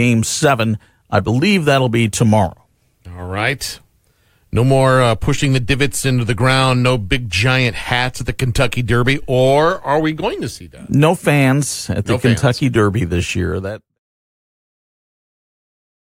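No technical faults can be heard in this speech recording. Near the end the level eases down in a smooth fade out, beginning at around 13 s and finishing at 13.99 s, with no click or hard edge.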